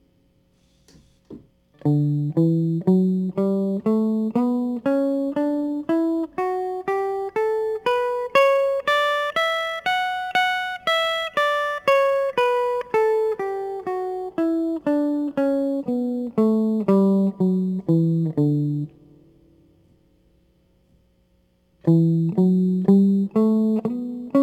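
Crude rate conversion runs through the whole music clip. The pattern points to a drop from 48 kHz to 44.1 kHz made by simply discarding or repeating the nearest samples without filtering, leaving unrelated tones roughly 30 dB down: a gritty, inharmonic fizz trailing loud, bright passages.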